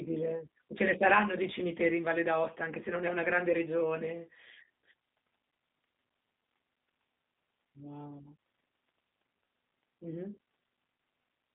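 From start to end the speech passes through a G.729 codec, with nothing above 3.7 kHz and a narrow band of roughly 200 Hz to 3.6 kHz. The voice is rebuilt from a vocal tract filter and sparse pulses, so it sounds plainly rough and synthetic, which fits an 8 kbit/s G.729A stream. Plain telephone band-limiting would lack that roughness.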